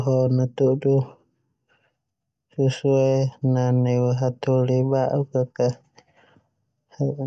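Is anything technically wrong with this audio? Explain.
No, nothing technically wrong can be heard here.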